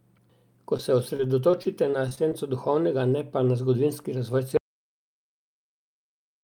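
A brief smear at 0.77 to 0.81 s is short concealed packet loss. A few hundredths of a second of the call arrived too late for the decoder, so the receiver bridged the hole by extending the preceding sound and then blending back into the real signal. About 12 ms of that stretch was synthesised. The rest, around 20 ms, is simply missing, leaving a small wobble rather than a clean continuation.

From 1.17 to 2.33 s, just before "duhovnega ne pa na", the speech turns choppy, with small pieces dropping out. This is repeated packet loss, heard as robotic sound. Seven separate gaps occur across the span, the longest about 22 ms. Each time, the decoder patched the gap by carrying the last sound forward, and the next loss followed soon after. Roughly 12 percent of the stretch is concealed audio rather than real signal.

Right after "pa na zgodovinski razvoj", at 4.57 s, the sound cuts off into total silence with no room tone, and it stays silent to the end. 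This is an audio dropout to silence. The input was likely lost, through a disconnected device, a failed link or a mute, while recording carried on writing silence. Whatever followed in that last stretch is gone.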